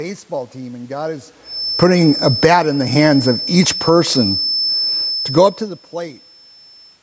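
From 1.41 s to the end, a feedback whistle sits behind the speech. It is a steady tone near 5.3 kHz, roughly 15 dB below the speech. The likely cause is a loudspeaker-to-microphone loop held just short of full feedback, ringing without building.

From 1.67 s to 2.66 s, the automatic gain is falling. The control judged the input too loud, or its noise too strong, and cut gain by about 12 dB. It falls again from 3.44 s to 4.03 s, by about 3 dB. Speech and background sink together.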